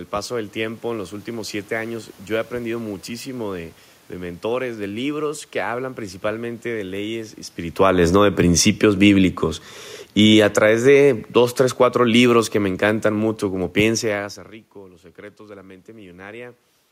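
Right after "hablan principalmente de leyes", at 7.67 s, the automatic gain starts falling: the control decided the input was too hot and pulls its gain down by about 13 dB through 14.33 s, so the speech and the room noise behind it sink together. This comes just after the talker shifts position around 7.5 s, which is a normal level change and not a fault.

Inside that dip, from 10.53 to 11.27 s, the automatic gain briefly rises, adding about 3 dB back, so voice and background swell together for under a second before the slide resumes. Near 14 s the talker moves again, which is ordinary.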